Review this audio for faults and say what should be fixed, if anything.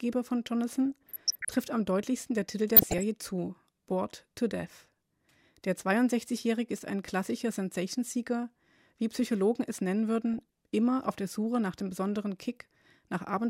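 Weak DAB reception let bit errors of under one percent slip past error correction into the MP2 data. Corrupted samples put short noise blips in single sub-bands, giving DAB burbling at 0.91–1.56 s before "am deutlichsten der", at 2.76–3.03 s, and at 10.34–10.41 s between "es nennen" and "immer auf der". Improve the reception, or take the programme from a cleaner feed, so error correction can recover every frame.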